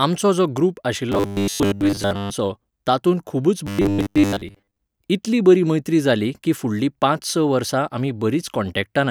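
Robotic sound from repeated short buffers at 1.12 to 2.30 s and 3.67 to 4.78 s: the speech becomes a rigid 100 Hz metallic buzz, likely from a 10 ms chunk being replayed while most of the real audio is skipped.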